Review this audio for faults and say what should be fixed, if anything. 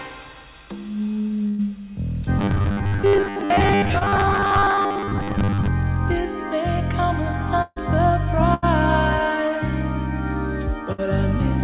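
Burst of packet loss occurs at 1.48–1.60 s, 7.62–7.78 s, 8.54–8.64 s and 10.92–11.00 s, with about 100, 140, 80 and 60 ms of sound missing. At each gap the receiver extends the last sound and lets it fade, so it turns into a held buzz or a thinning hiss. At 7.62 s it fades to roughly 20 ms of silence before the sound resumes further on. Unlike the short concealed loss below, these gaps last long enough to hear the fill decay and to notice the jump in content afterwards. Redundant or forward-error-corrected packets would prevent this.

Robotic sound from repeated short buffers runs from 2.39 to 5.68 s. The sound takes on a rigid, metallic 100 Hz buzz that still loosely follows the material. That pitch matches a 10 ms chunk being replayed over and over, and most of this stretch is repeats rather than new audio. The likely cause is audio being delivered too seldom, with the playout side covering the wait by looping its last buffer. 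A concealed loss is a single brief event, but this buzz holds one fixed pitch for over three seconds. Keeping the capture and playout threads fed on time, or enlarging the device buffer, would prevent it.

Short concealed packet loss occurs from 3.98 to 4.05 s, inside the robotic stretch. About 20 ms never arrived. The receiver covered it with roughly 24 ms of extrapolated sound and then crossfaded back, which leaves a brief smear and trims about 10 ms of real audio. It differs from the bursts because it is much shorter. It is only a momentary wobble. Better network stability or a slightly deeper jitter buffer would prevent it.

The call path itself cuts everything above 4 kHz, as expected for a narrowband telephone codec.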